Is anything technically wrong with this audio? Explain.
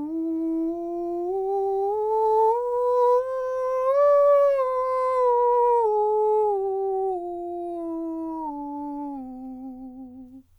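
Yes. From the start to about 3.2 s the music carries sample clock jitter: the converter's timing wanders by a couple of microseconds, so each sample is captured a little early or late. Where the waveform moves fastest, that timing slip turns into an amplitude error, sitting roughly 45 dB below the music. It comes through as a fine hiss and grain that thickens on loud, bright passages and drops away in quiet moments.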